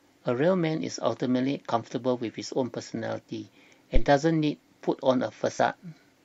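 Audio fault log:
5.58 s, compressed frames skipped. The speech jumps forward here by roughly 30 ms. A few whole frames of the compressed stream never reach the output, either missing from the file or rejected by the decoder as damaged. The skip fits a loss of about three short codec frames. Playback resumes at the next good frame.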